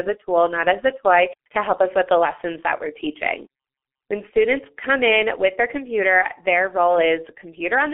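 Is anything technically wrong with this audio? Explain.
Yes. The whole clip runs through what sounds like a G.723.1 codec, heavily damaged throughout. The speech is squeezed into a telephone band of roughly 250 Hz to 3.4 kHz, so it's thin and muffled with no air on top. The codec works in 30 ms frames and updates its model of the voice slowly, and the grainy, hoarse texture fits a bitrate around 6.3 kbit/s. Consonants get smeared, and the voice has that rough, buzzy internet-phone quality.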